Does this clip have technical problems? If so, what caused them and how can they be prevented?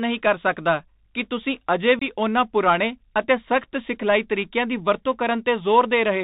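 Yes. The speech sounds narrow and boxy throughout, with scratchy s sounds and a grainy hiss beneath it. That is the Bluetooth CVSD headset codec, which fits a 64 kbps link. It encodes one up-or-down bit per sample with an adapting step, passes nothing above 4 kHz, and distorts when loud high sounds outrun the step. Prevention: use a headset and phone that negotiate wideband (mSBC or LC3) voice, or record on a wired microphone.

Between 1.99 and 2.03 s there is an abrupt hole, and the speech returns briefly quieter. This is unconcealed Bluetooth headset packet loss: a few voice packets, roughly 22.5 ms of audio, never arrived and were replaced by silence or an idle pattern rather than patched over. Prevention: keep the headset close to the phone with a clear path and away from Wi-Fi congestion.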